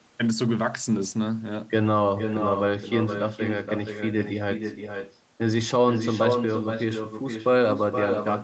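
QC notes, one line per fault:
Throughout, echo with no canceller: every phrase is trailed about half a second later by a second copy only about 6 dB quieter and thinner than the original, so the speech sounds doubled and smeared. The far end is playing the call through a loudspeaker, its microphone picks that playback up, and nothing subtracts it, so the talker's own audio returns after the full network round trip, on top of the band-limited call audio that stops at 8 kHz.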